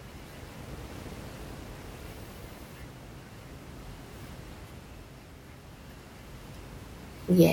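Speech carrying overlap-add ripple from 0.35 s to 2.72 s: windowed frames rejoin without constant-gain overlap, so the level dips by about 11 dB around 400 times a second, a metallic buzz with extra tones around each note. The waveform envelope shows regular scalloping, and the spectrogram shows evenly spaced vertical striping. Room noise sits about 10 dB below the speech.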